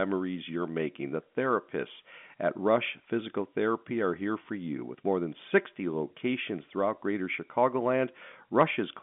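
No faults are audible; the speech carries the narrow band of G.711 telephone coding, roughly 200 Hz to 3.5 kHz with nothing above 3.7 kHz.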